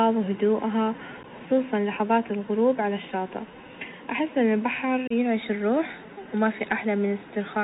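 From the start the speech carries the sound of the Bluetooth CVSD headset codec. The link sends one bit per sample, each bit nudging the waveform up or down by an adaptive step, and the result fits a 64 kbps CVSD stream. The damage is plainly audible: nothing survives above 4 kHz, loud bright passages overrun the step size and distort, sibilants come out scratchy, and a fine granular hiss sits beneath the speech the whole way through.

At 1.23 s there is a short burst of unconcealed Bluetooth headset packet loss. About 11 ms of audio, a few packets' worth, is missing and replaced by silence or an idle pattern with no attempt to cover the hole. The edges are abrupt and can click, and the level briefly dips as the CVSD decoder regains its step size. A longer loss of the same kind runs from 5.07 to 5.12 s, dropping 30 ms, several packets, as a hard-edged gap in the speech.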